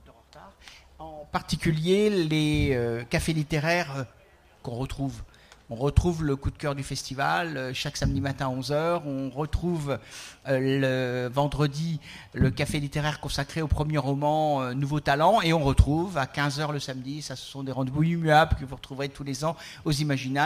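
Throughout, a hiss and roughness rides on loud and bright passages and vanishes in silence: sample clock jitter of a few microseconds, leaving errors roughly 30 dB below the sound.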